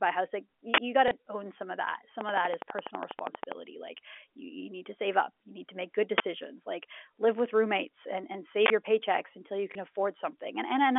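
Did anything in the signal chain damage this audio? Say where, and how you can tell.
Yes. At the driver or buffer stage there are three uninitialised-buffer bursts: 0.74 to 0.78 s, 6.18 to 6.20 s, and 8.66 to 8.70 s, the last just after "with roommates and and" and before "your paychecks until you". Each is a sudden, loud slab of digital noise with hard edges, lasting 40, 20 and 40 ms, which fits whole blocks played out before any audio was written into them. Unlike a click, each is a filled block of garbage, not a single pulse.

On the network side, packet loss with the last packet repeated shows up at 1.08 to 1.11 s, just before "own some of that", and at 9.72 to 9.75 s, just after "your paychecks until you". Each is a small blip lasting 30 ms, which points to a single lost 30 ms packet concealed by replaying the previous one. Unlike a buffer burst, the filler is recycled speech, not noise.

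From 2.21 to 3.53 s there is a train of clicks: about fifteen near-identical pops at a steady 12.2 per second, roughly 15 dB above the speech, continuing through pauses. The regular pacing and unchanging shape suggest an external pulse source, likely interference from nearby equipment or a faulty connection, not anything in the content. Isolated packet stutters or buffer bursts would not repeat at a fixed rate like this. The G.711 A-law telephone band is audible throughout, capped near 3.4 kHz.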